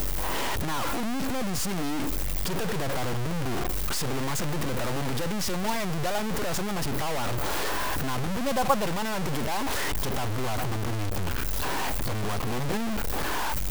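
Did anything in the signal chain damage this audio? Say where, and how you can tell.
Yes. The damage likely happened at a sample-format conversion, where the speech was cut down to very few bits by truncation with no dither. The grain fits about 4 bits. It runs through the whole clip and tracks the speech: the distortion swells and shifts as the level changes, and quiet stretches turn gritty or sputter into silence. Because the rounding error follows the signal rather than sitting as a steady hiss, it sounds harsh, with the noise only roughly 5 dB under the speech.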